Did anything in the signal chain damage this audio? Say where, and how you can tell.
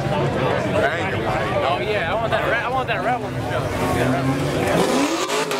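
No, no signal-chain damage heard.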